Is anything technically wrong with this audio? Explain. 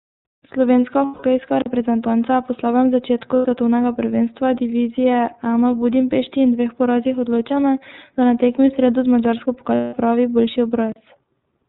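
Yes. The speech has three faults.

iLBC codec damage runs through the whole clip. This narrowband VoIP codec codes each frame's excitation independently, and the band stops at 4 kHz. The result is muffled speech with a rough, somewhat synthetic edge that is plainly audible throughout. The character fits iLBC's 13.33 kbps mode with 30 ms frames. Sibilants lose their top end.

Lost iLBC frames occur from 1.05 to 1.23 s, from 3.36 to 3.46 s (between "je po slabem začetku" and "svetovnega prvenstva divizije"), and from 9.75 to 9.94 s (just before "pravi boljši"). The first and last gaps last 180 ms, which points to six missing 30 ms frames. The middle gap is 90 ms, about three frames. Over each gap the decoder repeats the last pitch cycle blended with noise, so the sound becomes a held, slightly buzzy vowel. Because each frame decodes independently, clean speech returns almost immediately afterward.

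Blocks of digital silence occur at 9.25 s and from 10.92 to 10.96 s, right after "pravi boljši". In each, the sound cuts abruptly to silence and then comes back without any fade. The first block is only about 4 ms and sounds like a tick. The second is 40 ms and sounds like a brief hole. The likely cause is the output buffer not being filled in time.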